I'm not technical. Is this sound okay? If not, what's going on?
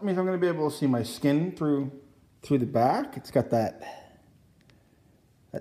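Yes, this sound is fine, and there's nothing wrong with it that I can hear.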